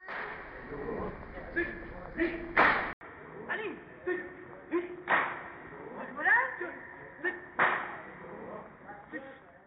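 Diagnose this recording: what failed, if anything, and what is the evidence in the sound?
At 2.93 s the audio drops out for 80 ms, then returns dull and boxy, with nothing above 3.8 kHz, slightly quieter, over a new low noise floor. At the driver stage, the input likely switched to a poorer device whose narrower band cuts the top.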